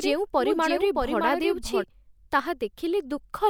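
From the very start until 1.84 s there's a doubled audio track: a second, somewhat quieter copy of the speech trails about 0.7 s behind, dry and full-band, then cuts off abruptly. Likely a slower capture path or an out-of-step edit mixing it in twice.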